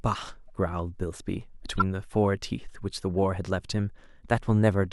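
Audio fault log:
0.49 s and 1.78–1.82 s, corrupt frame decoded: damaged compressed frames were played anyway, so misread gains and codes put energy at the wrong frequencies. The first is very faint, the second loud. Unlike a dropout or click, each carries misplaced energy for roughly a few frames' length.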